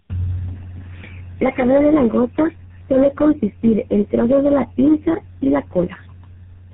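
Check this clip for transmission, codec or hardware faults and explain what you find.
One fault runs through the whole clip: tandem speech coding.

Throughout the speech, the sound is rough, muffled and warbly, with nothing above about 3.8 kHz. The speech appears to have been decoded and re-encoded at each link border, so every coder worked on the previous coder's damaged output. The cumulative degradation points to about four low-rate codecs in sequence, consistent with GSM full rate and AMR-NB at 6.7 kbit/s, joined by G.711 mu-law links. That makes the speech harsher and more smeared than any single codec would.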